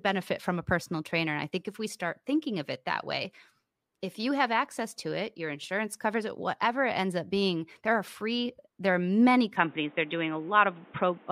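Speech that turns abruptly dull and boxy at 9.57 s, with no gap, through to 11.3 s, likely from an input switched to a poorer device. A spectrogram shows nothing above 3.8 kHz and a new noise floor roughly 30 dB down, and the waveform's level steps by around 5 dB.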